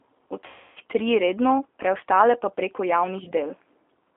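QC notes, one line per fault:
Throughout: G.729 codec. The speech passes through a low-rate CELP coder, which fits an 8 kbit/s G.729A stream, and a 300 Hz to 3.5 kHz line band. Each frame is rebuilt from a filter, pitch predictor and sparse pulses, so the sound is narrowband, plainly rough and somewhat synthetic.
0.46–0.78 s: VoIP packet loss concealed by the speech codec. About 300 ms of stream went missing, which fits ten lost 30 ms packets. The decoder kept extending its last pitch and filter at falling gain, so the speech smears into a buzzy tone or coloured noise that fades, then sounds weak as it recovers.
3.24–3.32 s: VoIP packet loss concealed by the speech codec. A short dropout of about 30 ms, consistent with a single lost packet, was filled by extrapolating the previous frame. It is heard as a brief smear with a weak or distorted stretch just after.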